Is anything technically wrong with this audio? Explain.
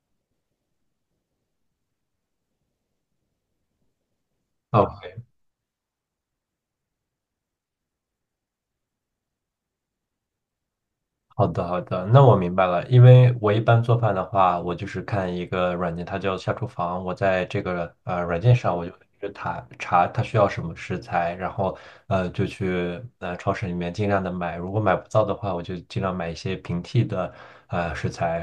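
No, nothing is technically wrong with this audio.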